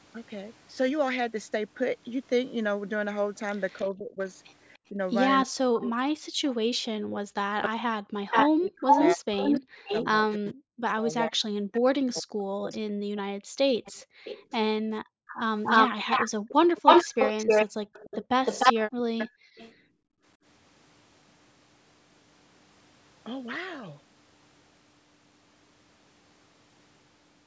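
From 3.78 to 5.78 s there's an echo leak: a faint copy of the speech trails it by 301 ms, about 15 dB down. That's likely a speakerphone whose echo canceller didn't fully remove what its microphone picked back up.

Overlapping that, from 3.83 to 13.17 s, the speech is suppressed in double talk. Over roughly five seconds in pieces, it dips or cuts out by as much as about 40 dB, likely because the canceller couldn't tell the talker from the echo and turned both down.

From 7.62 to 19.73 s a second echo leak runs, delayed 461 ms and a touch louder than the speech itself.

Between 13.45 and 17.93 s the background is gated by the echo canceller. The room sound drops out by about 40 dB for around a second and a half in total, then comes back. Another short double-talk suppression hits from 18.82 to 19.19 s. A final gating dip runs from 19.47 to 20.23 s.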